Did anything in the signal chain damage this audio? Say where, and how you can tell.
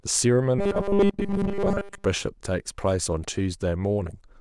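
Yes, from 0.59 to 2.05 s there's robotic sound from repeated short buffers, likely a driver or buffer underrun. A rigid, metallic buzz at 200 Hz sits on the speech, which fits a 5 ms chunk being replayed while most of the real audio gets skipped.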